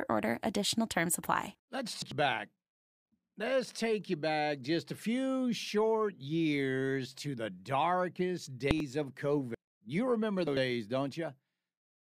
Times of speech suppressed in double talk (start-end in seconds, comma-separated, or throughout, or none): none